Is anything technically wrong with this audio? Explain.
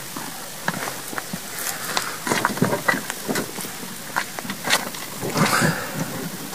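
Yes. From 0.0 s to 4.59 s there is crude rate conversion. The pattern fits a change from 48 kHz to 44.1 kHz using plain linear interpolation between samples, with no anti-aliasing filter. That error repeats on a cycle set by the two rates. It creates shifted, inharmonic copies of the sound, roughly 25 dB below it. You hear a gritty, inharmonic fizz riding on the louder and brighter parts of the audio. It stops after 4.59 s.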